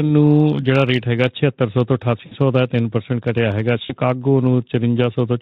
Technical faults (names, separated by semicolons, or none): VoIP packet loss concealed by the speech codec